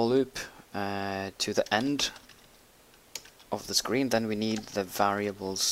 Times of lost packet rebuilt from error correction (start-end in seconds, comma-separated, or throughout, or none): none